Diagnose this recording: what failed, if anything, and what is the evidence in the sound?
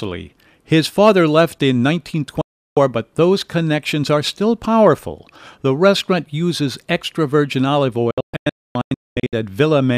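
Digital broadcast dropout at reception: speech mutes 2.41–2.77 s after "father left in", then breaks into scattered holes (longest 256 ms) from 8.11–9.33 s after "uses extra virgin olive", as failed frames were silenced.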